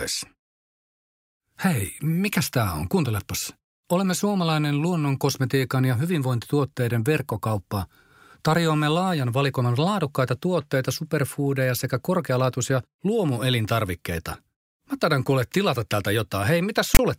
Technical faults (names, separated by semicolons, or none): file tags played as audio